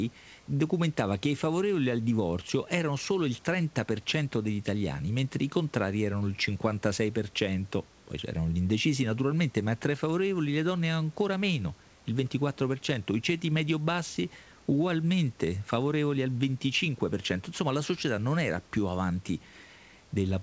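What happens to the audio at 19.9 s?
Nothing goes wrong at 19.9 s; the audio is intact there, with the room's background noise sitting about 33 dB below the speech.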